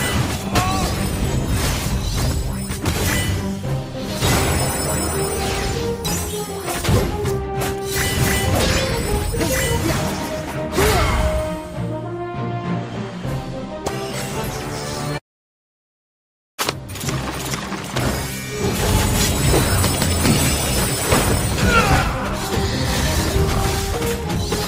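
No technical faults can be heard anywhere in the recording. Nothing in the sound points to a problem with how it was captured or handled.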